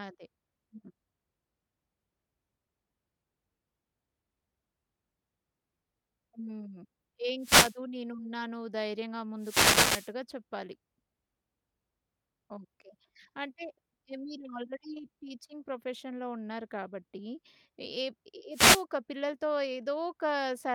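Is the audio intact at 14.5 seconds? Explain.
Yes, the speech at 14.5 seconds plays through cleanly, with no dropout, click, distortion or other fault at that moment.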